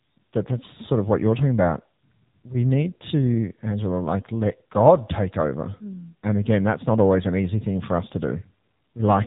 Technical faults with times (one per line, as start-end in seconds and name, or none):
0.00-9.27 AMR narrowband mobile codec